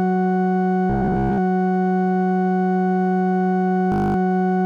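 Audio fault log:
0.90–1.39 s, robotic sound from repeated short buffers: audio likely arrived too seldom, so a 15 ms piece kept repeating, forcing a rigid, metallic 66.7 Hz buzz onto the music.
3.92–4.16 s, system hang loop: the system froze while the hardware kept cycling one 20 ms buffer, playing it 12 times as a steady 50 Hz buzz.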